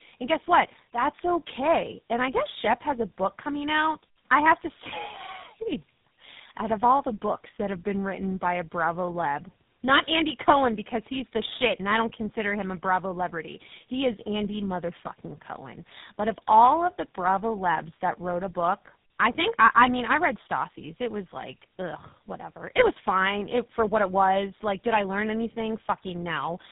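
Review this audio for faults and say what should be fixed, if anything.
The speech sounds rough, muffled and warbly for the whole clip, with no content above about 3.8 kHz. This is tandem speech coding. The call was decoded and re-encoded at each border between links, so each coder worked on the previous coder's damaged output. The roughness and warble stack up beyond what any single codec would cause. The sound fits three speech codecs in a row, ending in GSM full rate at 13 kbit/s. To prevent it, carry the call end to end on one codec, using transcoder-free operation or codec negotiation, so the speech is coded only once.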